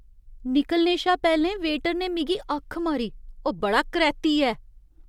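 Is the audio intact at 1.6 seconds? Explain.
Yes, the speech at 1.6 seconds is intact, with no dropout, click, distortion or other fault audible at that moment.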